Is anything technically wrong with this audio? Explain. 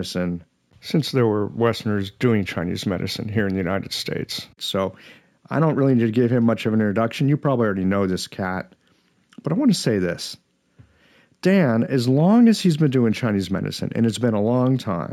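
Yes. Throughout the speech there is imaging from linear upsampling. The sound points to material at about 16 kHz raised to 44.1 kHz by joining samples with straight lines, a weak interpolation filter. It dulls the top of the original band and leaves mirrored copies between 8 and 16 kHz, roughly 30 dB down, heard as a faint metallic shimmer on sibilants. Unlike aliasing, the extra energy sits above the original band, mirroring it, rather than folding down inharmonically.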